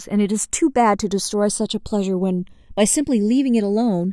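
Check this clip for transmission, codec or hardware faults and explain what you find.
One fault is present for the whole of the speech clip: the channels drifting apart. The two sides appear to run on separate clocks, with an error of roughly 100 ppm, so the delay between them creeps up to around half a millisecond by the end. Summed to mono, the comb-filter notches slide slowly through the spectrum, heard as a gradual flanging sweep on the speech.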